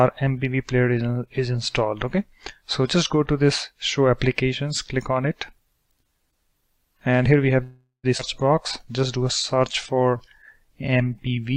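From 7.63 to 8.05 s there is a call audio freeze. The last sound is carried on as a fading buzz for about 0.4 s, including 120 ms of silence, most likely because delayed packets emptied the jitter buffer. The audio then resumes where it stopped, with nothing lost.

At 8.17 to 8.21 s comes a skip ahead. Roughly 300 ms of audio is dropped and the two sides are joined with only a 13 ms bridge, so playback lurches forward. This recovers part of the delay built up by the freeze.

There are two stretches of jitter buffer slow-down. From 8.55 to 10.23 s, repeated pitch periods stretch the audio to 94% speed and add 115 ms. From 10.65 to 11.55 s, the audio runs at 90% speed and adds 98 ms. In both, sounds are drawn out at unchanged pitch while the buffer rebuilds its reserve.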